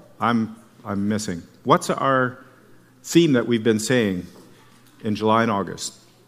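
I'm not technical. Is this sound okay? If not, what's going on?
Yes, nothing in the signal points to a technical problem: it stays steady and continuous, with no dropouts, glitches or distortion anywhere.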